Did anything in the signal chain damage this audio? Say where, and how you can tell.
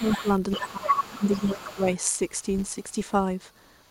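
Yes. The damage is in call processing. The speech is suppressed in double talk from 0 to 0.28 s, dipping about 10 dB, and from 0.56 to 1.86 s, dipping about 15 dB, while a second voice is present. The likely cause is an echo canceller ducking both voices at once. Network loss would instead leave abrupt gaps unrelated to the other talker.

The other side's voice is leaking through at about 10 dB below the speech from 0.03 to 1.95 s, about 25 dB below at 2.49 to 2.64 s, and faintly, about 40 dB below, from 3.66 s to the end. The likely cause is residual loudspeaker echo that was not cancelled. Unlike wiring crosstalk, the leak comes and goes rather than holding steady.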